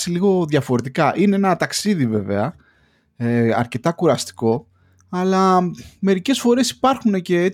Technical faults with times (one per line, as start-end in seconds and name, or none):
1.81-1.86 one channel drops out